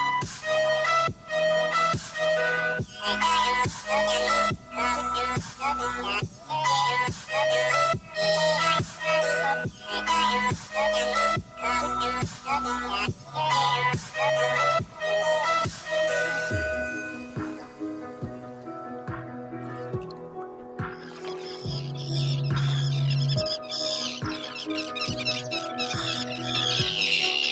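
A noise suppressor applied to music or sounds stays active throughout, treating sustained material as noise, so levels pump and tails thin, swinging by about 10 dB. Sound cut by the noise suppressor is clearest from 0.26 to 3.02 s, 4.56 to 15.88 s and 17.02 to 21.67 s, with drops of about 9 to 10 dB, and briefly from 25.7 to 26.38 s, about 4 dB. The audio passes through an Opus call path with nothing above 8 kHz.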